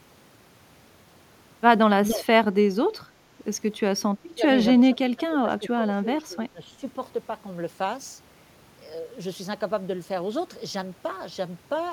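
Speech, with the level dipping in three places: from 2.05 to 2.26 s and from 4.25 to 4.47 s by about 10 dB, and from 4.77 to 6.85 s by about 15 dB, in dips totalling around one and a half seconds. The likely cause is speech suppressed in double talk, an echo canceller turning the talker down along with loudspeaker echo. Unlike a noise gate, the dips fall within the speech itself.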